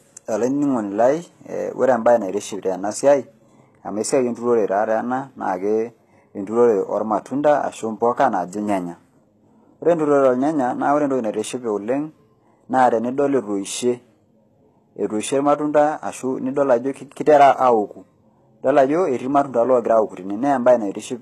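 Speech with HE-AAC compression damage throughout, plainly audible: s sounds come out gritty and metallic, and the treble sounds bright yet synthetic, stopping dead at 12.3 kHz. Unlike plain low-bitrate AAC or MP3 dullness, the upper band is present but pasted-on, likely spectral band replication at a bitrate near 16 kbps.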